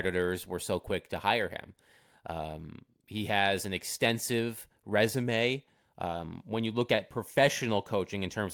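No technical faults can be heard anywhere in the speech.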